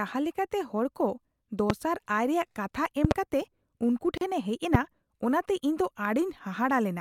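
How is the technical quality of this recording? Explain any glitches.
The recording has two kinds of glitch: four loud pops and one short dropout.

Loud pops at 1.70–1.73 s, 3.05–3.14 s (a double pop) and 4.75–4.77 s jump roughly 20 dB above the speech, which continues underneath. They are likely voltage transients from a plug, switch, static or driver fault, shaped into a sharp thump by the downstream circuitry.

A gap at a join of encoded pieces opens at 4.18–4.21 s: a gap of about 37 ms with smeared edges. Separately encoded segments were joined untrimmed, leaving encoder start delay and end padding in, before the speech resumes where it stopped.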